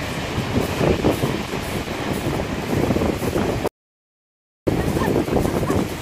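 At 3.68 s the sound cuts to dead silence for about a second, returning at 4.67 s: an audio dropout to silence, likely a lost input link.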